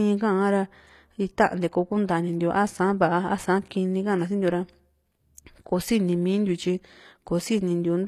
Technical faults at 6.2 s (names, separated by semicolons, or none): HE-AAC compression